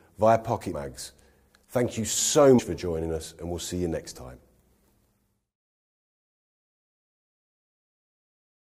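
At 0.72 s and again at 2.58 s, compressed frames get skipped: the decoder drops whole 23.2 ms frames, jumping ahead about 70 ms and then about 150 ms. Each join is an abrupt jump forward in the audio.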